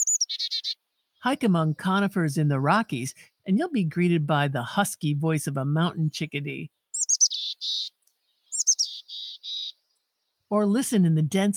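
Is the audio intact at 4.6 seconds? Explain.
Yes, the audio is intact at 4.6 seconds, with no dropout, click, distortion or other fault to be heard at that point.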